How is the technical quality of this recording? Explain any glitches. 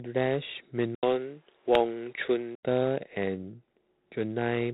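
The quality is limited throughout, with one brief change partway through.

Across the whole recording the speech carries a harsh, rasping hiss that rises and falls with its level, and nothing above 3.9 kHz survives. That is G.726 ADPCM at 24 kbit/s: each sample is coded as a few bits of difference from a predicted value, and the coarse steps produce that signal-following noise.

From 0.95 to 2.63 s the sound turns duller, stopping at 3.8 kHz, with an 80 ms gap at the switch and a faint new background noise roughly 40 dB down while loudness stays about the same. The likely cause is the input switching to a poorer device.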